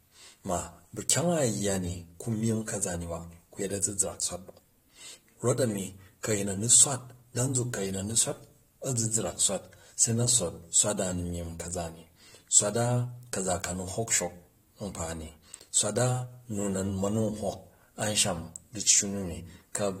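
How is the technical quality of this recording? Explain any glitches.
There is one glitch in the recording. Pre-echo at 6.23 s, just before "ku a̱yin a̱ni swat": the codec smeared block quantisation noise ahead of a sharp attack, adding a 10 ms hiss that softens the onset.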